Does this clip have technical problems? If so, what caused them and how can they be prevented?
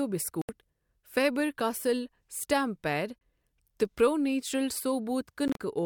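Yes. The speech drops to silence from 0.42 to 0.49 s, briefly at 3.20 s, and in scattered short gaps between 5.48 and 5.58 s, then resumes as if it had played on. This is likely a Bluetooth dropout, where late packets were discarded. Keeping the headphones close to the source and away from crowded 2.4 GHz traffic prevents it.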